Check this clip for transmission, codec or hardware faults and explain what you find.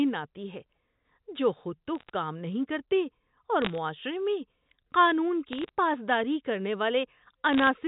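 Bit errors on a digital phone line, in four short bursts over the G.711 telephone coding: 1.95–2.10 s (just after "جو خود تو"), 3.62–3.78 s, 5.52–5.69 s (just before "پاس داری کرنے") and 7.53–7.67 s. Flipped bits, at a rate well under one percent, each corrupt a single sample. This produces sharp crackling ticks over intact speech, with no gaps or muting as in packet loss.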